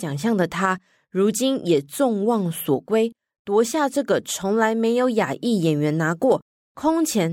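A short bit of speech, and nothing technically wrong turns up anywhere in it.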